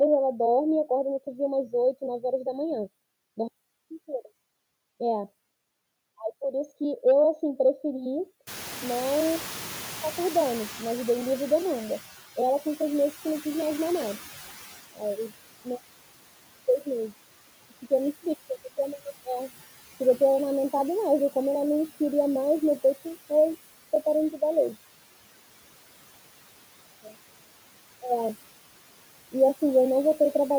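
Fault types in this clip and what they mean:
noise suppressor artifacts: The suppressor lowers each frequency band it judges to be steady noise, frame by frame, cutting the background by about 17 dB throughout. The noise sinks in the gaps between words and rises again underneath them, so the floor pumps with the speech.
noise suppressor catching up: When the room noise jumps by about 21 dB near 8.5 s, the suppressor's noise estimate lags behind. The louder background comes through with less reduction at first, then sinks over about 3.8 s, settling to about 13 dB of cut by 12.24 s.
speech cut by the noise suppressor: The suppressor mistakes parts of the speech for noise and turns them down along with the background. This drops the sound by about 16 dB between 14.94 and 15.31 s and about 12 dB at 27.04–27.14 s, leaving those brief stretches swallowed and faint.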